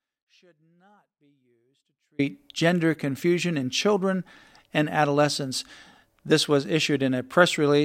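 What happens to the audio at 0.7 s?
An audio dropout to a faint residue runs from the start until 2.19 s, likely a lost signal with the path still live, leaving only faint sound roughly 40 dB down.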